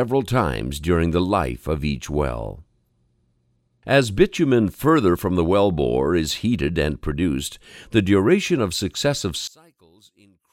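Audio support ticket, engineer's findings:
9.47 to 10.52 s: abrupt collapse to a faint remnant, level down about 32 dB. Likely one channel inverted, so shared content cancels when summed to mono. Waveform shows a near-flat trace. Spectrogram shows energy mostly blanked, with a sparse residue.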